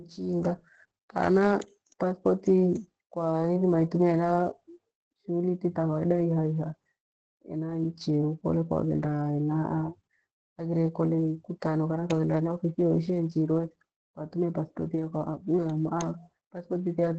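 From the first moment to the end, the speech carries heavy Opus voice compression. Nothing comes through above about 8.7 kHz, so sibilants lose their edge and everything sounds a bit muffled. The coder's linear-prediction model is rebuilding the voice from a coarsely coded excitation, and that gives it a hoarse, slightly robotic grain. The band edge and the amount of damage fit the SILK mode at a low rate, somewhere around 10 kbps.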